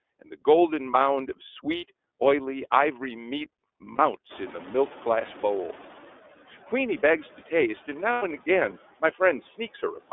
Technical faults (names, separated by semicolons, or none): noise suppressor artifacts; iLBC codec; lost iLBC frames; noise suppressor catching up; speech cut by the noise suppressor